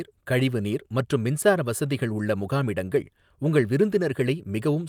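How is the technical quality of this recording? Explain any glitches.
No glitches are audible anywhere in the recording, so there is nothing to explain.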